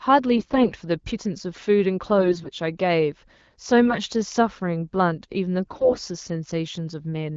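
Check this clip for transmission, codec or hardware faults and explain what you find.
The speech has four short bursts of AMR bit errors, carried over an AMR wideband (HD Voice) link that sounds like it is running at 12.65 kbit/s with only light coding damage.

AMR bit errors occur at 0.36–0.74 s, 2.18–2.50 s, 3.85–3.99 s and 5.66–5.99 s. In each burst the frames still passed their check on the critical bits, but the weakly protected bits were flipped, so excitation pulses land in the wrong positions and the fine pitch, gain and spectral values drift. Pitch and loudness hold roughly steady while the voice turns hoarse, scratchy and gargly. The last burst has a much denser error rate than the earlier ones.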